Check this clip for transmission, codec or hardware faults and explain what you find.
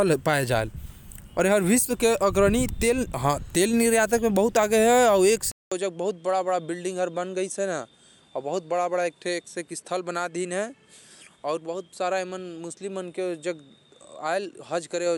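One fault: from 5.52 s to the end, after a 200 ms gap, the speech turns duller and about 5 dB quieter, with a faint new hiss. This is likely an input switched to a poorer device. The spectrogram goes empty above 11.4 kHz and the waveform shrinks.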